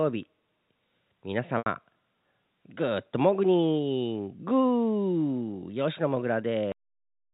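At 1.58 s the speech briefly turns into a held, buzzy tone that fades to silence before the speech returns with a quick cross-fade at 1.66 s. This is packet loss with pitch repetition: about 80 ms of audio went missing, which fits four 20 ms packets, and the receiver looped the last pitch period to cover the gap before fading it out.

At 6.72 s the audio stops dead in the middle of a sound and drops straight to digital silence with no natural decay. This is a cut-off end. The final buffers were never written or played out, so the remainder of the recording is simply absent. The G.711 telephone coding keeps everything below 4 kHz throughout.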